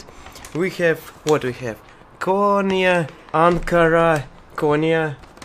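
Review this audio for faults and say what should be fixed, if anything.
No faults were heard; nothing needs fixing.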